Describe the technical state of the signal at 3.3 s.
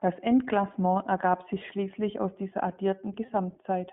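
Around 3.26 to 3.29 s the sound briefly turns into a held, slightly buzzy vowel, then snaps back. These are lost iLBC frames, consistent with one missing 20 ms packet that the decoder covered by repeating the last pitch cycle mixed with noise. Because each frame decodes independently, it recovers immediately.

Underneath, the audio has the rough, synthetic edge of the iLBC codec, plainly audible and confined to a 150 Hz to 3.4 kHz telephone band, which fits its 15.2 kbps mode.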